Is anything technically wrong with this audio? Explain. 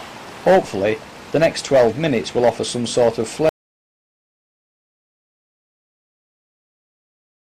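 Yes. At 3.49 s the audio drops out to silence and stays silent through to the end of the clip, nearly 4 seconds later. The cut is abrupt, arriving mid-flow, and what follows is silence rather than quiet room tone, so no background remains at all. That pattern most likely comes from the input being lost, through a disconnected device, a broken link or an accidental mute, while recording carried on writing empty samples. Anything after that point is gone.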